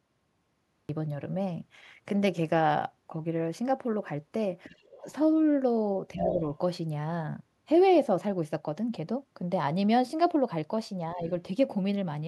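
The clip opens with a cut-off start. There is digital silence until 0.89 s, when the speech begins abruptly mid-sound with no natural attack.

From 4.69 to 5.02 s, the other side's voice leaks through faintly, far below the talker. This is likely residual loudspeaker echo the canceller missed.

Between 6.14 and 6.42 s, the speech is suppressed in double talk and dips by roughly 5 dB. Over 6.2 to 6.34 s, the other side's voice leaks through strongly, only slightly below the talker. The canceller likely struggled with both voices at once.

At 11.15 to 11.19 s, a brief dip of roughly 5 dB marks another short double-talk suppression.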